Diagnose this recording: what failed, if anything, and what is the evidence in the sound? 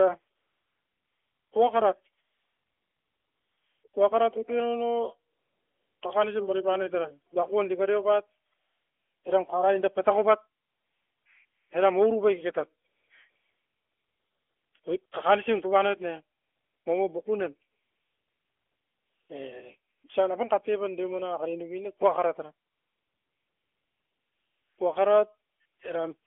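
AMR comfort noise, at the codec stage. From 0.36 to 25.8 s, pauses become a smooth, steady hiss that switches in and out. Gaps run from 40 ms to 2.12 s, the longest after "ne kua kara tara". Silence detection stopped speech frames. The receiver synthesised the filler noise.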